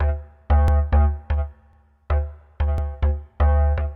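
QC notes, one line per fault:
0.68–0.73 s, 1.73–1.78 s, 2.78–2.83 s: overlapping chunks. Each one-second chunk starts 50 ms before the previous ends, so that slice replays, giving a regular stutter.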